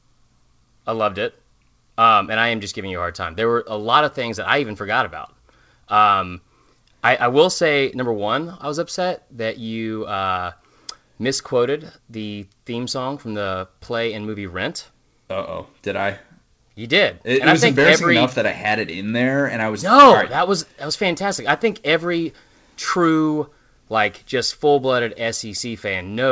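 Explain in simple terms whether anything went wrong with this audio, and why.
Nothing went wrong with this speech recording. It came through an internet call line, which is why the sound stops at about 8 kHz and lacks the very highest, airiest frequencies.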